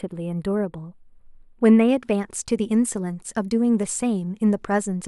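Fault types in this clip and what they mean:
Channel delay (comb filtering): from the start to about 1.89 s, one channel lags the other by only a few samples, well under a millisecond, and when the two sum to mono the shared speech cancels at evenly spaced frequencies, with the first notch near 7 kHz. That leaves the top end thin and phasey. Unlike a low-pass roll-off, the loss falls in fixed notches, so energy returns above each dip.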